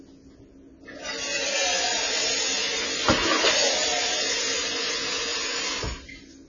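Throughout, the sound is dull and smeared, and nothing survives above 7 kHz. This is likely heavy AAC compression, fitting a rate near 16 kbps that leaves the encoder too few bits to code the spectrum. A spectrogram shows a flat ceiling at 7 kHz and blotchy holes beneath.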